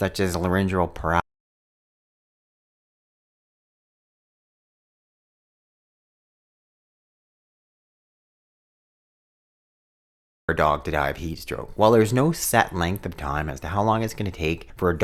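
At 1.20 s, after "as laryngeal", the speech cuts off mid-flow into an audio dropout to silence, returning at 10.49 s with "a dog to die". The 9.28 s gap is silent without room tone, unlike a pause or gate. The input was likely lost while recording continued.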